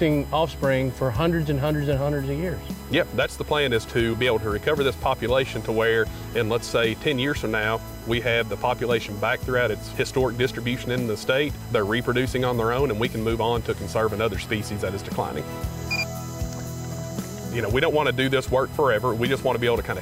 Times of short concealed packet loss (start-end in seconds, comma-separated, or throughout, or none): none